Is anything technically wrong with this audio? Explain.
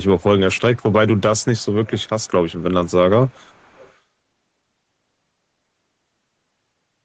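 Yes, there is echo leak. On a loudspeaker end of the call, the echo canceller likely left part of its microphone pickup in place, so the speech was returned about 424 ms late. A faint delayed copy, roughly 30 to 35 dB below the speech, surfaces at 0.02–0.24, 0.55–0.93, 1.16–1.21, 1.37–1.66, 1.84–2.31, 2.48–2.64, 2.85–2.92 and 3.24–3.98 s.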